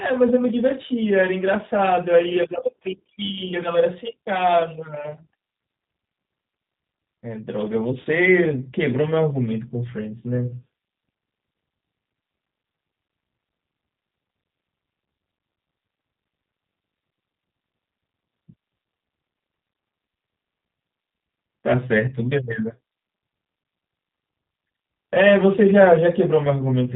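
All the way through, the speech has that G.729 codec sound, plainly audible damage of the kind you'd expect from an 8 kbit/s stream. The decoder rebuilds each voice from a vocal tract filter, a pitch predictor and a handful of pulses. Nothing gets through above 4 kHz, so it sounds muffled, a bit rough and synthetic.

Around 8.02 to 8.07 s there's VoIP packet loss concealed by the speech codec. A gap of about 30 ms, which fits three lost frames, gets patched by stretching the last pitch and filter into a buzzy tone or a coloured noise that fades, and the voice stays weak or distorted while the decoder recovers.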